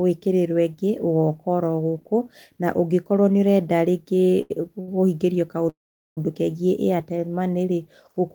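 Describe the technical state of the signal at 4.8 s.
At 4.81 to 4.89 s the speech hits a short stall from a late packet. The jitter buffer ran dry, so the last sound is held for 65 ms until the packet arrives. Unlike a lost packet, nothing is skipped; the speech resumes intact, just 65 ms later.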